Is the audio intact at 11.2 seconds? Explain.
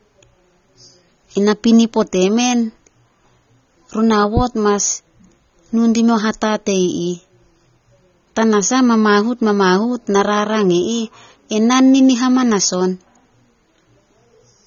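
No, the speech at 11.2 s, as throughout, likely went through heavy AAC compression, fitting about 24 kbps, leaving nothing above 6.9 kHz: dull, smeared, with a warbly fizz.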